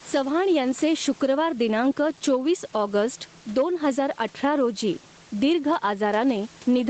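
From the start and across the whole recording there is gain pumping: the input gain was likely set far too high, so a fast limiter clamps it on every loud syllable. The level swings by around 10 dB.

From 0.15 to 0.38 s there is hard clipping: the signal overdrove a stage by about 4 dB, and that stage sliced the waveform peaks flat. The squared-off tops add high harmonics, heard as a brief harsh crackle on the loudest moments there.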